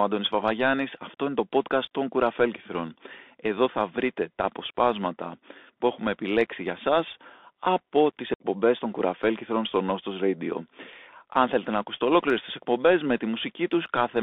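From the start, the whole clip is narrowband. The sound fits a Bluetooth CVSD headset codec, at a rate that points to a 64 kbps link. The band runs from about 250 Hz to 3.6 kHz, so everything above is gone. CVSD sends one bit per sample, saying only up or down, with an adapting step. Loud high sounds outrun that step and distort. S sounds turn scratchy. A granular hiss sits under the speech.

At 8.34 s, just after "για σας από τις", the speech drops out. The gap lasts until 8.39 s. This is unconcealed Bluetooth headset packet loss. Voice packets between headset and phone never arrived, which fits a run of roughly fifteen short packets. Nothing filled the hole smoothly. Silence or an idle pattern took their place. The edges are abrupt and can click. When the speech resumes, it comes back briefly quieter, as CVSD rebuilds its step size.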